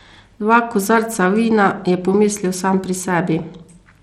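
From start to finish, the speech carries plainly audible coding damage. The likely cause is Bluetooth SBC compression at a starved bit pool, fitting roughly 96 kbps. The upper bands get too few bits. Treble flickers and drops away. A gritty, aliased roughness rides on every sound.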